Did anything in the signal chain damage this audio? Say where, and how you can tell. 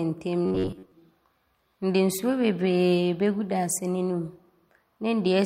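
Yes: robotic sound from repeated short buffers, 0.46 to 0.92 s, a rigid 93.8 Hz buzz; likely a starved driver buffer looping about 11 ms segments through most of that span.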